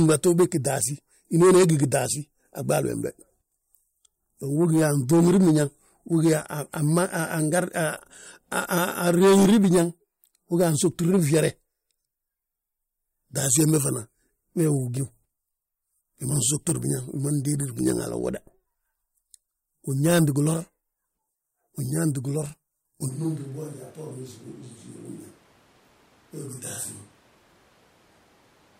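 At 23.1 s the speech suddenly turns roomy and hollow, loses bass, drops by about 10 dB and stays that way to the end, with background noise now sitting only about 25 dB below the voice. This is likely a switch to a distant microphone after the close one failed or was dropped. A simple gain drop would lower the level without adding room sound, and added reverb would not thin the low end or raise the noise.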